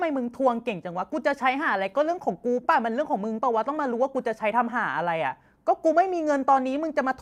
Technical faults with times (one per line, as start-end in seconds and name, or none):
none